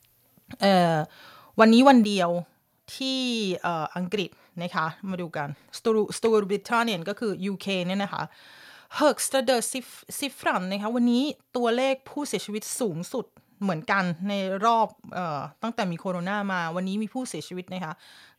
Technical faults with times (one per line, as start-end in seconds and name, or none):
1.61-1.88 microphone overload
2.04 microphone volume stepped down